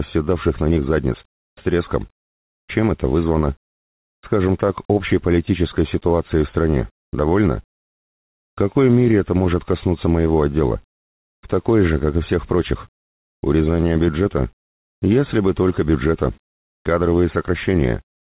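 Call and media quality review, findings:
Comfort noise in place of the background, 7.04–7.13 s (90 ms, about 19 dB quieter), 13.04–13.43 s (390 ms, about 15 dB down), 14.66–15.02 s (360 ms, about 15 dB down). The real background, already about 65 dB below the loudest parts, gives way to a flat, textureless hiss. Likely cause: discontinuous transmission, with the receiver synthesising noise during pauses. Unlike a noise gate, there is no dead silence, just steady fill.

Onset clipped by the voice detector at 7.11 s and 13.41 s, each a 20 ms cut at the end of a comfort-noise stretch. Sound resumes with no soft attack. Likely cause: the sender's voice detector reacting late, so the first frames were never sent. Unlike packet loss or a fade-in fault, it falls only at restarts after pauses. Band limit at 4 kHz fits a G.711 call path.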